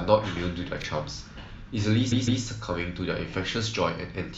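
At 0.80 s, two 20 ms pieces of the speech swap places, a case of chunks out of order: the later chunk plays first and the earlier one, one slot late, follows. Nothing goes missing, but the three hard joins between 0.80 and 0.84 s produce a brief jumbled flicker. On a waveform the cycles break sharply at each joint; a spectrogram shows thin vertical lines there and harmonics that step rather than glide.

From 2.11 to 2.42 s, repeated frames make the speech stutter. A block of about 157 ms is played twice more after its first pass, which points to a run of around six compressed frames being written again, and the clip grows by about 0.31 s. The waveform shows the same envelope shape copied three times in a row, and the spectrogram shows an identical pattern tiled side by side, with a vertical seam at each restart.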